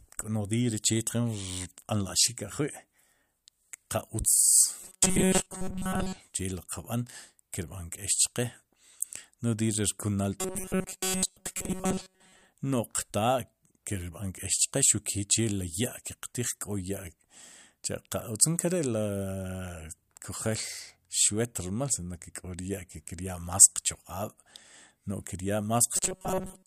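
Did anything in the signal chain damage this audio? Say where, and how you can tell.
Yes. Robotic sound from repeated short buffers appears at 4.82–6.17 s, 10.40–12.47 s and 25.97–26.67 s, where the speech turns into a rigid 188 Hz metallic buzz. This likely comes from a starved driver buffer looping chunks of about 5.3 ms in place of most of the real audio.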